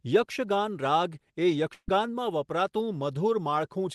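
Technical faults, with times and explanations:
1.73–1.89 s, burst of packet loss: about 150 ms of speech never arrived, and the receiver covered it by stretching the last sound for roughly 144 ms while turning it down, ending in about 60 ms of near silence. It sounds like the last sound held and dying away, then an abrupt jump ahead. On a spectrogram the last sound's spectrum is held flat and fades to a dark strip. The waveform shows the held sound shrinking to nothing.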